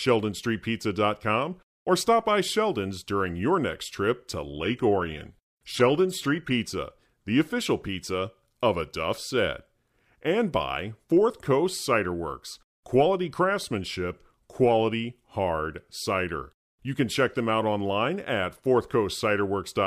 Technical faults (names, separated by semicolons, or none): adaptive stream at a lower bitrate